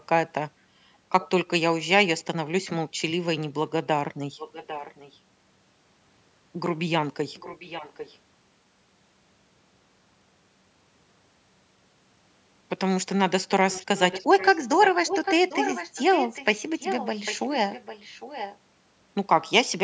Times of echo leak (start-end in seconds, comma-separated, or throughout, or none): 1.21-1.29, 4.38-5.19, 7.35-8.18, 13.70-18.58